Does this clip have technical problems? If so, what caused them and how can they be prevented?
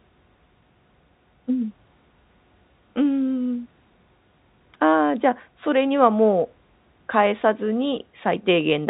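No, the speech shows no technical problems; the 4 kHz bandwidth ceiling is simply the normal sound of G.711 telephone coding, so there is nothing to prevent.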